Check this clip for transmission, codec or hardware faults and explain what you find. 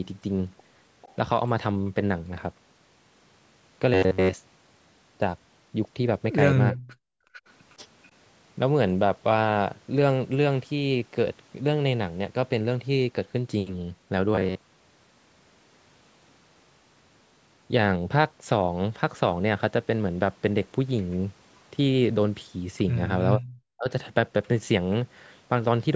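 Yes, there are four kinds of fault. The speech is band-limited with nothing above 8 kHz, consistent with normal call processing.

Echo leak appears at 1.02–1.15 s, 7.33–7.50 s, 7.70–7.75 s and 8.03–8.08 s. It is a faint copy of the speech trailing by about 0.44 s and sitting roughly 25 to 40 dB down, likely from an echo canceller letting loudspeaker pickup through. On a spectrogram it shows as weak, smeared repeats of earlier harmonic patterns.

Robotic sound from repeated short buffers occurs at 3.94–4.36 s and 14.35–15.05 s. The speech becomes a rigid metallic buzz at 93.8 Hz, which fits roughly 10.7 ms chunks being replayed in place of most of the real audio. The likely cause is late-arriving audio. A spectrogram shows evenly spaced vertical striping, and the waveform shows identical repeating cycles.

Background gated by the echo canceller appears at 6.78–7.33 s. The room sound is pushed down by up to about 40 dB for around half a second while the loudspeaker side plays, then it recovers. 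The waveform's noise floor collapses almost to silence, and the spectrogram shows a dark vertical gap across all frequencies.

Speech suppressed in double talk occurs at 23.38–23.44 s and 23.72–23.90 s. With both sides talking, the canceller likely attenuated the near talker as if it were echo. The speech dips by roughly 30 and 40 dB in brief bites. The waveform shows sudden notches in the envelope, and the spectrogram shows the harmonics briefly blanked.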